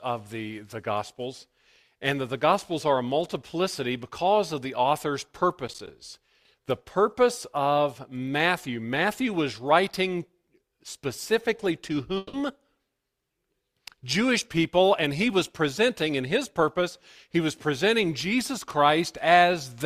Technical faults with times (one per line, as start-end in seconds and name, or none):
5.68-5.90 processor overload crackle
12.17-12.35 long network dropout